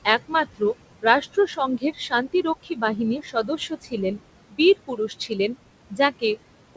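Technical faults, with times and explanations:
Throughout, noise suppressor artifacts. The room noise sits about 14 dB below the speech. Between phrases it drops by about 21 dB, then swells back whenever speech resumes. The suppressor works frame by frame and band by band, so the noise pumps on and off with the speech. Nothing sounds above 8 kHz, which fits the G.722 call path.
0.28–0.61 s, 1.78–2.13 s, 2.63–2.99 s, 3.21–3.94 s, 4.51–4.6 s, 4.87–5.55 s, 5.9–6.23 s: speech cut by the noise suppressor. In each stretch, parts of the speech sink by about 16 to 19 dB. Each affected patch lasts from roughly a tenth of a second to nearly half a second. The longest run is around 3.2–3.9 s. The suppressor misjudged these quiet parts as noise and turned them down with the background. They sound swallowed and faint.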